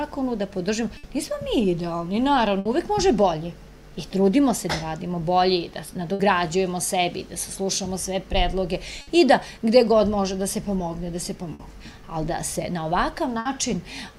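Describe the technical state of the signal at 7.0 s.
At 7.0 s the signal is intact, with no audible dropout, distortion, glitch or other fault in the sound at that point.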